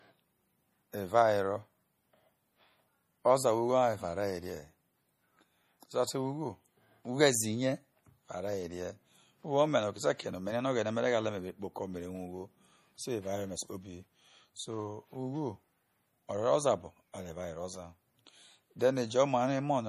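Speech with plainly audible MP3 compression damage throughout: nothing is present above 15.2 kHz, and the weakest spectral detail drops in and out between frames, giving a watery, swirly texture. This fits a low bitrate of around 40 kbps as the likely cause.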